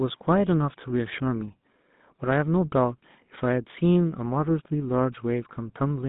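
From start to finish the speech has a buzzy, gravelly roughness, clearly audible, and sounds thin and boxed in, with little below about 150 Hz and nothing above about 3.7 kHz. This is the GSM full-rate codec, whose damage fits a 13 kbps rate. It models the vocal tract as a filter and drives it with a coarse train of regularly spaced pulses that keeps only every third excitation sample, so the natural voice source becomes a rasping buzz.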